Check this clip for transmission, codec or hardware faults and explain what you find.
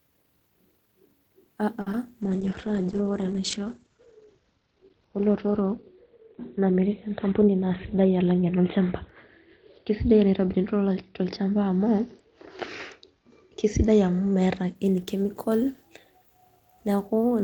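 Four network-related faults affect this speech clip, all early or mid-call.

At 1.81–1.87 s, a short stall from a late packet: the jitter buffer ran dry and the receiver held the last sound for about 50 ms. Unlike loss, nothing is skipped.

At 1.92–1.94 s, short concealed packet loss: about 10 ms never arrived and was synthesised from the preceding sound, giving a tiny smear where real audio is missing.

From 2.22 to 14.81 s, a call bitrate drop from 32 to 12 kbps narrows the bandwidth from 20 kHz to 4 kHz, bottoming out for about 5.4 s. It sounds muffled, coarse and rough.

At 7.24–7.94 s, a jitter buffer speed-up plays the audio at 106% by trimming pitch periods, roughly a twentieth of a second in total. The pace rushes without any pitch rise.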